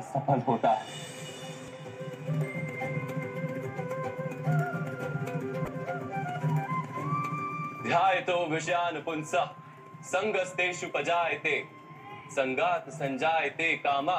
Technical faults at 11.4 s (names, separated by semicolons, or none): none